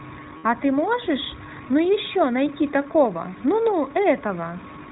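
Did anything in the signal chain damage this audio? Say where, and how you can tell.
Yes. At the codec stage, the whole clip of speech is band-limited to 4 kHz, with a plainly audible rough, synthetic edge. That fits iLBC at around 15.2 kbps with 20 ms frames, where each frame's excitation is coded independently and nothing above the narrowband limit survives.

At the network stage, lost iLBC frames leave a gap from 0.38 to 0.46 s, roughly 60 ms, consistent with three dropped 20 ms frames. The decoder fills it by repeating the last pitch cycle mixed with noise, heard as a held, buzzy vowel, and recovers almost immediately afterwards.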